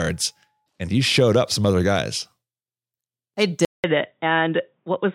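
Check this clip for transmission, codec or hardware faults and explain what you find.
One fault: an input switched to a poorer device, likely, from 3.65 s to the end. A 0.19 s silence sits at the switch, then the speech turns dull, with nothing above 3.8 kHz, a faint new noise floor and similar loudness. The spectrogram shows a gap, then a flat top at 3.8 kHz.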